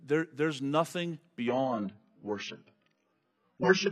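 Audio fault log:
1.48–3.92 s: adaptive stream at a lower bitrate. Sudden, gapless loss of everything above 6.5 kHz, with grainy artefacts, fitting a switch to a very low-bitrate stream.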